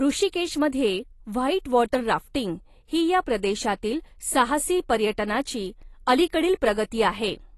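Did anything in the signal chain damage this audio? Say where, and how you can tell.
Yes. The codec stage, most likely AAC compression at a low rate consistent with about 32 kbps, discarded and coarsely quantised spectral content. Throughout the speech, nothing remains above 12 kHz, and sibilants and sustained sounds come out dull, smeared and warbling.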